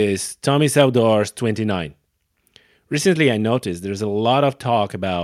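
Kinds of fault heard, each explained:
Nothing stood out on listening to this speech recording.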